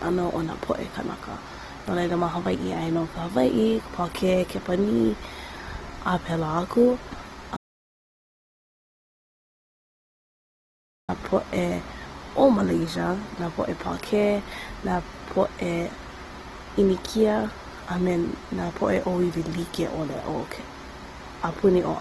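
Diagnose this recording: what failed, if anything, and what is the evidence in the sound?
Codec stage: grainy, rough speech throughout, nothing above 12.2 kHz, and no swirling spectral holes like MP3, which points to likely Opus compression in CELT mode, fitting about 16 kbps.

Input stage: an audio dropout to silence from 7.57 to 11.09 s, about 3.5 s of silence without room tone, likely a lost input while writing continued.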